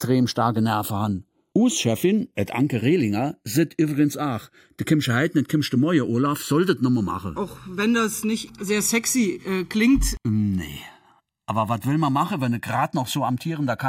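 Throughout, the channels drifting apart, with clocks roughly 70 ppm off, slide to about 1.5 ms of delay. In mono, comb notches sweep one way, unlike cyclic flanging.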